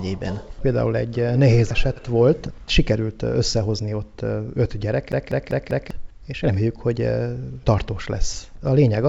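At 1.96 to 1.98 s there is a skip ahead. About a second of audio was discarded while later audio was already queued, so playback jumps straight across with no fill. The waveform shows an abrupt join, and the spectrogram shows a hard vertical seam where the two sides of the jump meet.

From 2.06 to 4.02 s the jitter buffer speed-up drains the excess delay by snipping out tiny pitch-period slices, around 150 ms in total. The sound runs about 8 percent fast at unchanged pitch, so it feels hurried. Spectrogram harmonics stay level while events crowd closer together in time.

From 5.12 to 5.91 s comes the CD-stuck-on-one-turn stutter: a 0.20 s segment replays four times, each restart preceded by a brief mute. It is a quick, mechanical, evenly spaced repetition. The waveform shows identical blocks separated by short flat gaps, and the spectrogram shows the same pattern stamped repeatedly with thin vertical breaks. 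Throughout, the call path leaves nothing above 8 kHz, which fits a wideband G.722 codec.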